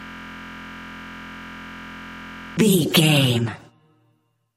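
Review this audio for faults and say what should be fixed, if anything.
From the very start until 2.57 s, the sound is a steady buzz at about 43 Hz. This is a system hang loop: the same 23.22 ms piece repeats exactly, over a hundred times, which fits a 1024-sample ring buffer being replayed while the computer or driver was frozen. To prevent it, have the audio driver or watchdog mute output whenever the buffer stops being refilled.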